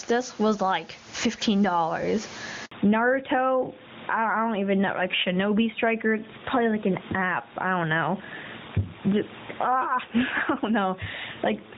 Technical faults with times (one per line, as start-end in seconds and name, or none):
0.00-11.77 gain pumping
2.65-2.71 handover gap
2.71-11.77 fallback to narrowband